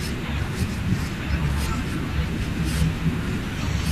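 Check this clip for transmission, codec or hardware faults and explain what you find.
No faults turn up in this clip.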